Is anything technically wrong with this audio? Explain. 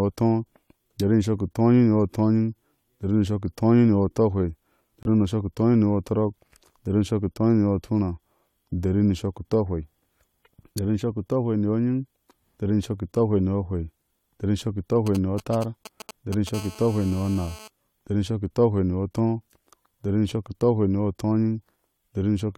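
Yes, there are three separate problems here.

First, a corrupt frame muted between 5.03 and 5.06 s. A chunk of the compressed stream got damaged, the decoder rejected it, and the player filled in silence. You hear an abrupt 36 ms hole in the speech, which fits a single dropped frame, with the timing carrying on normally afterwards.

Then from 15.07 to 16.49 s there are GSM signalling bursts. A 2G phone nearby is sending short clusters of radio bursts while it sets something up, and the audio circuitry rectifies them. The result is a galloping dit-dit-dit of short 217 Hz buzzes, sitting roughly 15 dB under the speech.

Right after that, from 16.54 to 17.68 s, it becomes proper GSM phone buzz. A phone nearby is now on a call, transmitting in bursts 217 times per second, and that rectified pulse train becomes a steady, raspy 217 Hz buzz full of harmonics. It sits about 20 dB below the speech and has nothing to do with the speech itself.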